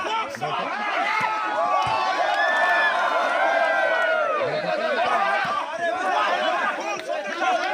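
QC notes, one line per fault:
Nothing here needed flagging, so there's nothing to log for this one.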